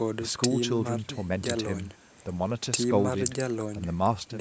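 Nothing technically wrong turns up in this bit of speech: it's simply been through ordinary call microphone processing, which trims the deepest bass and leaves nothing above 8 kHz, and that's just how a call sounds.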